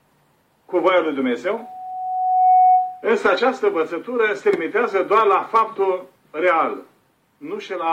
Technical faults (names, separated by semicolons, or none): loudspeaker feedback squeal